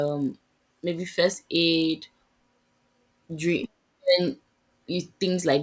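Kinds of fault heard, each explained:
Resampler restarted on every block, throughout: each 20 ms block was converted alone, leaving an edge error that buzzes at 50 Hz under the speech, consistent with a 24 kHz to 16 kHz conversion.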